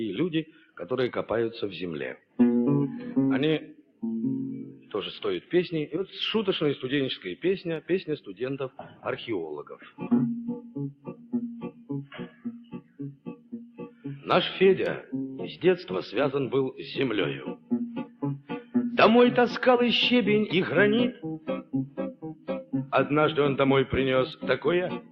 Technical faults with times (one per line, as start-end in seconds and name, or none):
0.00-25.11 noise suppressor applied to music or sounds
0.45-0.76 sound cut by the noise suppressor
2.17-2.39 sound cut by the noise suppressor
3.72-5.51 sound cut by the noise suppressor
7.81-14.05 sound cut by the noise suppressor
17.55-18.75 sound cut by the noise suppressor
21.13-22.73 sound cut by the noise suppressor
24.35-25.11 sound cut by the noise suppressor